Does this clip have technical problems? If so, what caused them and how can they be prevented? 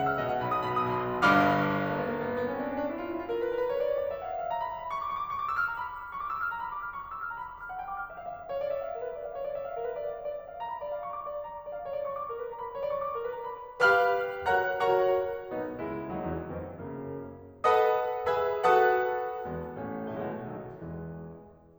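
No, this music has no audible technical problems.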